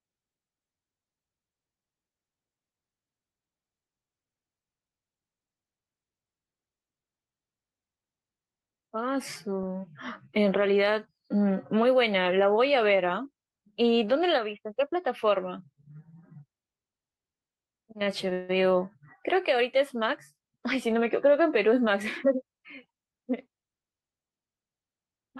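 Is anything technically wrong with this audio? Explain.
Yes, two timing faults in this speech clip.

At 18.03 to 18.08 s there is a short stall from a late packet: one packet arrived behind schedule, the jitter buffer emptied, and the receiver held the last sound for about 25 ms until it came in, then carried on from the same point. Nothing is lost, so the speech simply drags briefly with a faint buzz or dip. Its brevity separates it from a freeze. The held sound never has time to fade.

From 18.33 to 18.51 s comes a call audio freeze. The sound hangs and stretches into a fading buzz or hiss for about 159 ms, never dropping to full silence, before the speech resumes exactly where it paused with nothing skipped. The likely cause is packets delayed in transit, draining the jitter buffer. Unlike the stall just before it, the filler lasts long enough to audibly decay, adding a gap and pushing everything after it later.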